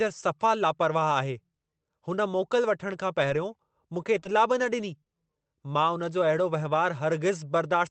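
Lost packet rebuilt from error correction at 2.61 to 2.63 s, 2.79 to 2.86 s, 3.22 to 3.24 s and 3.30 s. Each missing packet was replaced by the lower-quality duplicate that the next packet carried, so the sound never drops out. Instead, each 20 ms stretch turns briefly grainier and noisier. The Opus call path, whose sound points to roughly 32 kbps with audio limited to 8 kHz, adds this coarseness on top of its normal coding texture.

Scattered short gaps from 3.94 to 5.08 s. Around four packets went missing or arrived too late across this stretch, with no duplicate available. The receiver covered each hole by extending the preceding sound, filling roughly 70 ms in all, about 7 percent of the span, with no single gap much over 20 ms. The speech stays clear but picks up small ticks, smears and hiccups where the continuation was stitched in.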